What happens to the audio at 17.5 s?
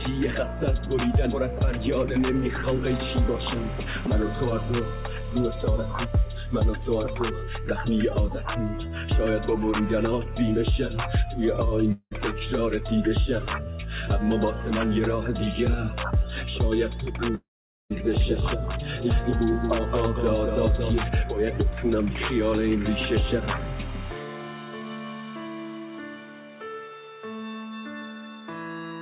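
From 17.35 to 17.93 s the sound breaks off, likely a long network dropout: about 0.56 s never arrived, so the receiver stretches the last sound into a fading buzz before near-silence. A spectrogram shows a smeared band dimming to blank, below the call path's 4 kHz ceiling.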